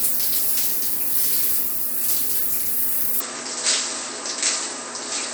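At 3.20 s the recording system most likely switched its input to a poorer device, and the rest of the clip comes through that lower-grade capture path. The new input passes nothing above 8.2 kHz, so the everyday sounds turn duller and lose their crisp top end. The level also drops by about 5 dB, and a fresh bed of background noise appears, roughly 40 dB under the signal. The change happens with no silent gap at the switch.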